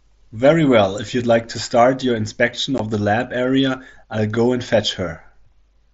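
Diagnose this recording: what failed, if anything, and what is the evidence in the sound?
At 2.78 s there's a brief hole in the speech, about 15 ms of silence with hard edges, which is unconcealed Bluetooth headset packet loss on the wireless link. The gap length fits a couple of dropped mSBC packets, and nothing patches over them.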